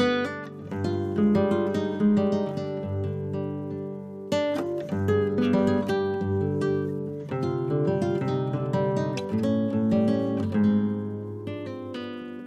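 Nothing in the audio stands out as a technical problem, so there's nothing here to point to at any moment along the way.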